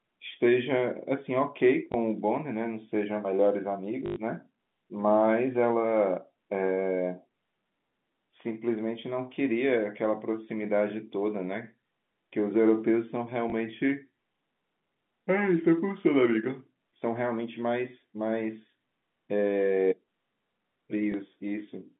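Packets went missing on the network four times in this speech, and the receiver filled each gap by repeating the last packet it had: packet loss with last packet repeated. Single 20 ms drops at 1.92, 13.5 and 21.12 s each leave a small blip. From 4.06 to 4.16 s, 100 ms of repeats loop the same fragment, producing a short robotic stutter that buzzes near 50 Hz, through the narrow G.711 telephone band.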